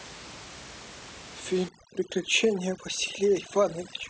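From 1.69 s to the end, overdone noise removal sets in. The room noise, about 17 dB below the speech beforehand, is cut so hard that bands near it vanish. This leaves a lower background broken up into twinkling specks. On a spectrogram, this looks like dark gaps scattered with isolated blips.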